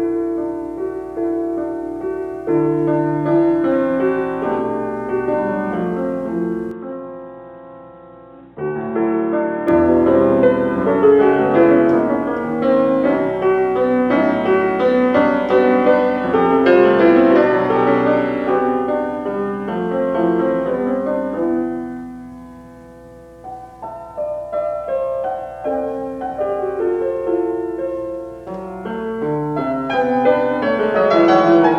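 From 6.71 s to 9.68 s the input likely switched to a poorer device, one that passes nothing above 3.8 kHz. The sound turns dull and boxy, drops about 5 dB, and picks up a faint new noise floor, with no gap at the change.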